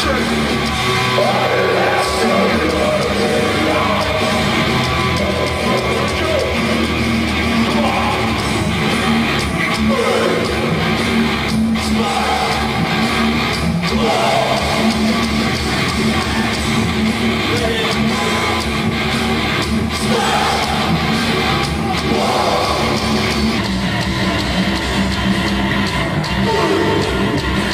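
From 23.58 s to 27.73 s, a section at the wrong speed plays at 0.88x. Pitch sinks roughly two semitones along with the tempo, unlike a pitch-only shift.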